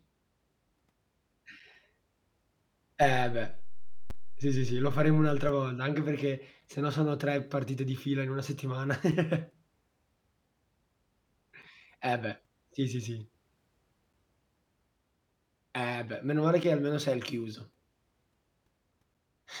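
A player or packetiser leaving silence between 2.5-second chunks first shows at 1.60 s: a gap between chunks of about 6.5 ms, a hard-edged hole in the speech with nothing lost. At 3.03 s the waveform's zero line jumps, a DC step heard as a low thump while the speech carries on unchanged. The offset lasts until 5.49 s, just before "volta anche". The chunk gaps recur every 2.5 s, at 4.10, 6.61 (just before "se no sono"), 9.12 (right after "fila in una settimana"), 11.63, 14.13, 16.64 and 19.14 s, each the same brief clean dropout.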